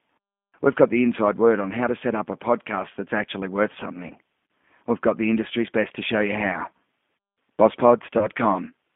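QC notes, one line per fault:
throughout: G.729 codec. The speech has been squeezed through a low-rate CELP coder, which fits G.729A at 8 kbit/s. The codec rebuilds each 10 ms frame from a vocal tract filter, a pitch predictor and a few pulses. The line passes only about 150 Hz to 3.5 kHz, so the sound is thin and muffled. Codec damage is plainly audible: the voice sounds rough and slightly synthetic.
4.08–4.13 s and 8.19–8.28 s: VoIP packet loss concealed by the speech codec. About 20 ms of audio went missing at each point, which fits one lost packet each time. The decoder filled each gap by extrapolating from its last pitch and filter settings while lowering the gain. The result is a short stretched sound that fades. Because each frame is built on the one before, the disturbance lasts past the gap, about 50 ms in total at the first point and 90 ms at the second.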